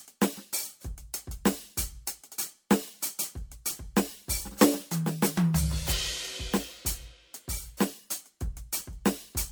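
Generation loss runs through the whole music clip. The music swirls and smears, the mix sounds hollow, and transients lose their snap, more degraded than a single encode would leave it. The cause is likely repeated lossy coding, with the artefacts pointing to MP3 at around 96 kbit/s applied about five times over. On a spectrogram, holes and flickering patches pile up through the upper bands below a ceiling at 20.1 kHz. The waveform's attack peaks look rounded and smeared.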